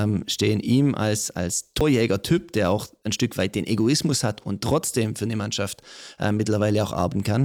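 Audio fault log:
1.81 s and 7.12 s, damaged data in a compressed stream: two very brief blips cut into the speech, the first just after "stehen ihm als als" and the second near the end. At each point part of the compressed stream was lost or corrupted, so the decoder misread the frame, lost sync and had to hunt for the next valid frame header. That break is heard as a short glitch, such as a chirp, squawk, click or brief hole.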